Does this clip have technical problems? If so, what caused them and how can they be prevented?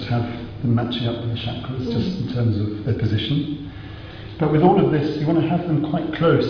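No, nothing stood out as a technical problem on listening, so there is nothing here that calls for prevention.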